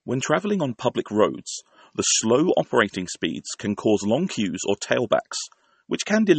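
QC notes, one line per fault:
Throughout: MP3 compression. The likely cause is an encoder starved of bits, consistent with a bitrate around 32 kbps, cutting the treble at a fixed point and dropping weak frequency lines that then flicker on and off between frames. Nothing remains above 8.4 kHz, so the speech sounds dull and lacks air, and the flickering components give it a plainly audible watery, swirling texture, with metallic chirps on s sounds and smeared consonant attacks.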